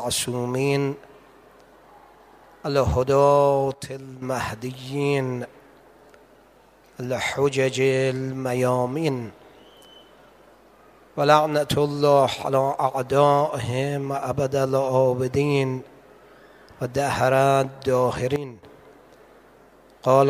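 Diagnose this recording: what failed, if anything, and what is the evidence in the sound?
The level drops abruptly twice: from 3.74 to 4.22 s by about 9 dB, and from 18.36 to 18.63 s by about 12 dB. Both times the background noise drops right along with the sound, with no fade in or out, so this is a sudden gain jump in the digital chain. It's likely a gain setting in the driver or call-processing stage being applied from one sample to the next without any smoothing ramp.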